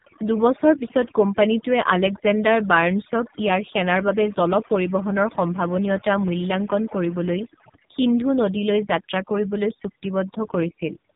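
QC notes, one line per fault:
Throughout, overdone noise removal: the noise suppressor is cutting individual frequency bands hard wherever they sit close to its noise estimate, so the background drops and breaks up into twinkling specks, and the quieter parts of the speech are stripped away too.
Throughout, AMR narrowband mobile codec: nothing above 3.8 kHz survives, and the speech is rebuilt from a vocal-tract model fed with sparse pulses. The heavy buzzy, synthetic quality fits one of AMR-NB's lowest modes, around 5.9 kbps, where too few bits carry each frame.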